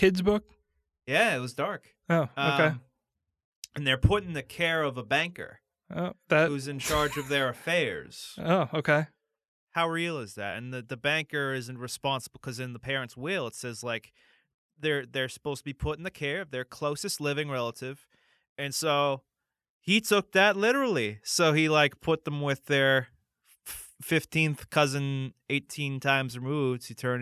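No technical faults are audible.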